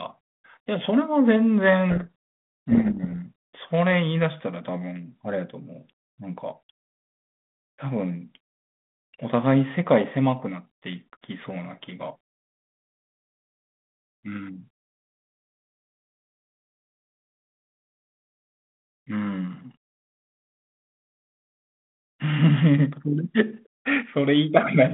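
Speech carried on a 32 kbit/s G.726 line (150 Hz to 3.5 kHz), with a codec payload misread from 1.9 to 3.17 s: sender and receiver disagree on the bit order of each G.726 code word, so the decoder applies wrong step updates and buries the speech in harsh distortion.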